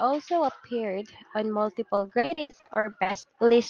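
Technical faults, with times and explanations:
1.95–3.51 s: repeated packet loss (robotic sound), starting just after "appeared on". Packets kept going missing across this stretch. Each hole was filled by stretching the last good sound, so about 37% of the span, roughly 580 ms in total, is patched rather than real. The longest single gap is 80 ms. The holes come in quick succession, so the patches chain together into a choppy, robotic texture. Pieces of the sound are lost, all within the call codec's band, which tops out near 12 kHz.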